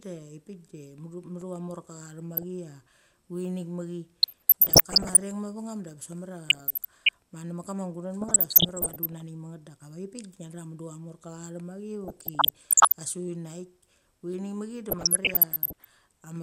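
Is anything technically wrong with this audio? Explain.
Yes, there are two kinds of fault. A block of digital silence at 1.41 s lasts about 1.5 ms, which fits a 64-sample block that was never filled in time. The speech drops abruptly to zero and returns with no fade, so it sounds like a single sharp tick.

DAB burbling occurs at 2.33 to 2.43 s, 4.23 to 5.21 s, 6.47 to 7.09 s, 8.21 to 9.22 s, 12.04 to 12.94 s and 14.89 to 15.89 s. Weak reception lets bit errors slip past error correction into the MP2 stream, with error rates of roughly 0.4 percent to one percent. These errors corrupt sub-band samples and scale factors, so individual frequency bands jump in level frame by frame. Over the speech this sounds like short blips of noise in single frequency bands.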